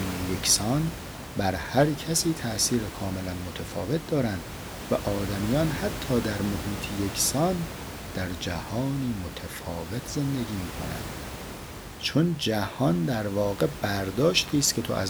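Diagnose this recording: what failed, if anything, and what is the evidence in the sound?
Nothing failed; no stage shows a fault anywhere.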